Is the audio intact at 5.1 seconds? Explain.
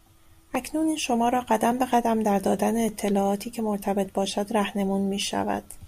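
No. At 5.1 seconds the speech sits inside a run of clock drift buffer slips from 0.55 to 5.22 s. A short click recurs every 1.17 s, about five in all. Each is likely a block of roughly thirty samples dropped or repeated as two mismatched clocks drift apart.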